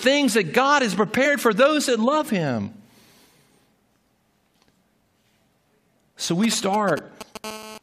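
At 1.24 s a brief glitch cuts through the speech: damaged data in a compressed stream. Corrupted bytes make the decoder misread a frame and hunt for the next valid header.

From 6.44 to 7.45 s come GSM signalling bursts. A nearby 2G phone handshaking with its network sends short groups of radio pulses, which the audio circuitry rectifies into a galloping dit-dit-dit of brief 217 Hz buzzes, roughly 10 dB below the speech. The irregular, rhythmic grouping separates it from a steady hum.

Inside that stretch, at 6.61 s, a second glitch of damaged data in a compressed stream appears. It is a single decoder glitch, not part of the phone pattern, and it does not follow the burst rhythm.

From 7.45 to 7.78 s the bursts turn into continuous GSM phone buzz. Once the phone is in a call it transmits 217 times a second, giving a hard, raspy, harmonic-rich buzz about 15 dB under the speech. Being unbroken, it differs from the stuttering signalling before it.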